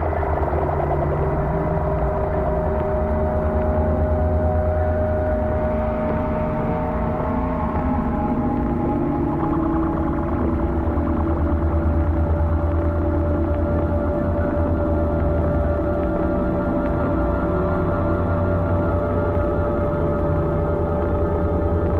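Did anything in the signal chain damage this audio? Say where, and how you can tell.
No, nothing along the chain left a mark I can hear on this one, so there's no stage to point at.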